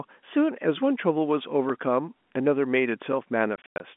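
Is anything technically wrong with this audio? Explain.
Yes, there are two faults.

At 1.70 s there is a block of digital silence. For about 1.3 ms the sound cuts out, which fits a 32-sample gap. The program likely failed to fill its output buffer in time. The hard edges make a small tick.

From 3.56 to 3.80 s, packet loss filled with silence chops the speech. About 160 ms is missing, scattered across 240 ms. The longest hole is 100 ms. The receiver played silence for each lost packet, and the gaps fit 20 ms packets.

The telephone-band G.711 coding itself passes sound from about 200 Hz to 3.5 kHz.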